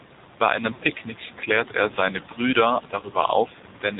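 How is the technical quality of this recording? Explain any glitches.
The technical quality is poor: the whole clip is heavily band-limited and coded, and it has two short breakups.

The AMR narrowband mobile codec shapes the entire speech clip. Nothing above 4 kHz survives, and the voice has a plainly audible buzzy, synthetic edge. That texture fits a low AMR-NB mode of about 7.4 kbps, in which a vocal-tract model driven by a few pulses rebuilds each 20 ms frame. A simple low-pass filter would dull the sound without this manufactured, slightly metallic quality.

Lost AMR speech frames occur twice. From 0.74 to 0.82 s, just before "klärt er seine", about 60 ms of coded speech is missing, which points to three consecutive frames failing their checks. The decoder repeats the last good pitch and vocal-tract settings at a falling gain, so the sound smears and sags before recovering roughly. 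At 3.0 s a single 20 ms frame causes a brief dip or warble. Unlike a plain dropout, neither breakup cuts to silence. Each is a stretched, fading continuation of the sound.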